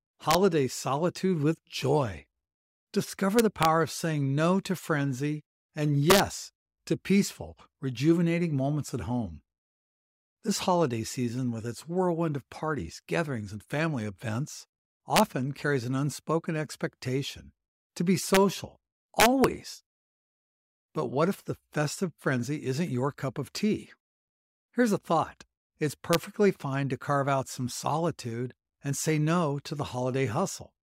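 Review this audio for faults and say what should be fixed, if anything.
Integer overflow cracks at 0.31–0.35 s (before "solitude with joy"), 3.39–3.65, 6.10–6.20, 15.16–15.20, 18.35–18.37 (after "unspoken expectation to be"), 19.20–19.44 and 26.13 s. Peaks only about 1–2 dB over full scale wrap to the opposite sign instead of flattening, so they produce violent cracks rather than clipping's duller buzz. Use saturating arithmetic or a limiter before the final integer conversion.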